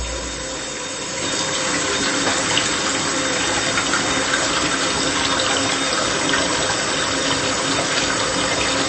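MP3 compression damage runs throughout: nothing is left above 8.3 kHz, and weak detail flickers watery and swirly, likely from an encoder starved of bits, consistent with roughly 32 kbps.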